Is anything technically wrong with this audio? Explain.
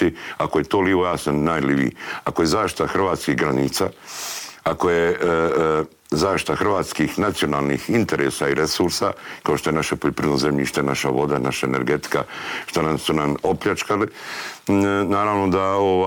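No, nothing in this audio registers as a technical fault.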